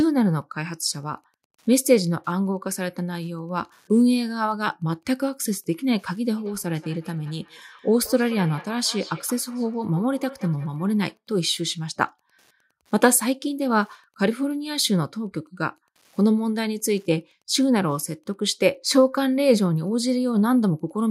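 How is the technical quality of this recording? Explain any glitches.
The recording has two technical faults. One runs through the whole clip, and one affects a stretch in the middle.

Wi-Fi interference is present from start to finish. A faint, steady ticking sits far below the speech, repeating every 102.4 ms, so roughly ten ticks a second. That interval matches a Wi-Fi beacon. A nearby wireless radio transmits the beacon, and the audio circuitry picks up the bursts and rectifies them. Each burst then becomes a small click in the signal. The level is very low, well beneath the voice.

A feedback echo between two devices appears from 6.37 to 11.20 s. The speech comes back as delayed copies spaced about a fifth of a second apart. The loudest copy is about 20 dB below the direct speech. The likely cause is two devices sharing one room on the same call. One device plays the other's audio, and that microphone captures it again. 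Neither echo canceller removes sound played by the other device.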